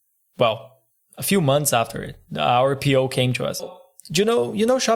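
At 3.59 to 3.64 s, just after "came to us", the speech jumps ahead with a blip, likely a stream segment skipped; the waveform shows an abrupt break.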